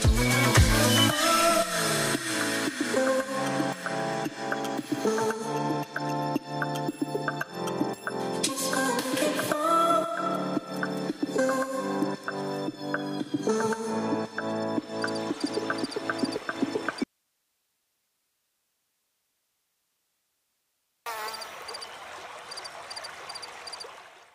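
At 17.04 s the sound breaks off abruptly and stays gone until 21.06 s, a gap of about 4.03 s. This is an audio dropout to a faint residue. The gap isn't silent. It holds only hiss, far below the normal level of the sound. The wanted signal was lost while the chain after the break stayed live, likely an interrupted feed upstream. On a waveform the envelope collapses to a thin noise band with vertical edges at both ends. A spectrogram shows a flat, faint noise floor in place of the signal.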